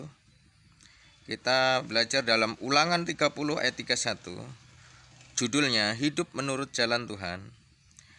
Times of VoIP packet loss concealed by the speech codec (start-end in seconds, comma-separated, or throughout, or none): none